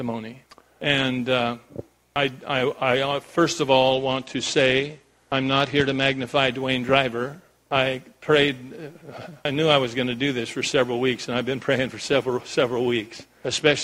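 Twice the audio dulls and turns gritty, from 3.93 to 6.35 s and again from 13.45 s to the end, a Bluetooth SBC bit pool drop that fits the bit pool falling from 28 to 12, near 96 kbps. Unlike a plain low-pass, coarse-quantisation grit accompanies the lost treble.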